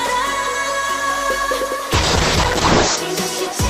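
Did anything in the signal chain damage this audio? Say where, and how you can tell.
Yes, there's a call bitrate drop in the codec stage, from 1.94 to 3.03 s. The call's bandwidth estimate collapsed and the encoder got squeezed from 128 kbps down to 6 kbps, sitting at that floor for about a second. You can hear it: the top end is chopped from 20 kHz to 8 kHz, so the sound goes muffled, and the coarse coding makes it rough and watery until the bitrate climbs back.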